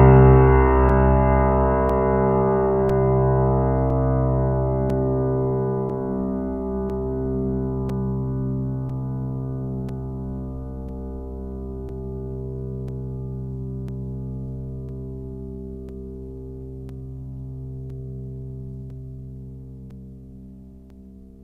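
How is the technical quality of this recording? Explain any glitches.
The music is broken by regular ticks, once every second from 0.89 s to 20.90 s, about twenty in all. These are periodic USB or driver dropouts: a background task stalls the USB bus or audio driver, and each time roughly 4 ms of music drops to silence.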